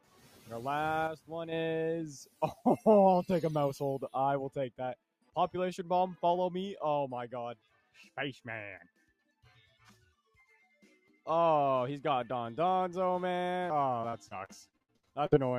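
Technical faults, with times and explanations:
0.00–0.48 s, 2.25–2.64 s and 7.55–7.96 s: sound cut by the noise suppressor. Each time the suppressor mistook wanted sound for noise and pulled it down by about 11 to 12 dB, roughly a few hundred milliseconds at a time, so sustained parts sink and decays end early.
1.07–1.52 s: sudden gain jump. The level drops by 6 dB with no ramp, most likely a gain setting applied instantly. Sound and background step down together rather than fading, giving an abrupt change in loudness.
14.01–15.35 s: repeated packet loss (robotic sound). About a dozen holes in quick succession, the longest 67 ms, are each filled by extending the previous sound. That covers about 30 percent of the stretch, so the audio turns choppy with fragments missing.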